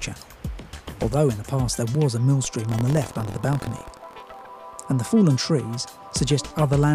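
Buffer tearing runs from 2.62 to 4.42 s: a rattling 43.1 Hz buzz, present only with sound. The writer and reader of the ring buffer have slipped, so a small slice of each period, fitting a 1024-sample buffer, replays audio about a tenth of a second old between hard joins.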